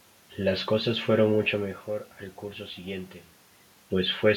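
No technical faults are audible.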